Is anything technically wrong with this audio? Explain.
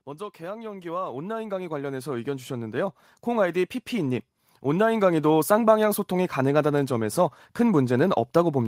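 Yes. The automatic gain control misbehaves twice in this speech clip. Twice it judges the input too quiet and gradually raises its gain: from 0.38 to 2.54 s it climbs by about 12 dB, and from 3.09 to 5.45 s by about 6 dB. Because the gain applies to the whole signal, the voice and the background noise swell together, each slow rise lasting over two seconds. The second swell is gentler than the first.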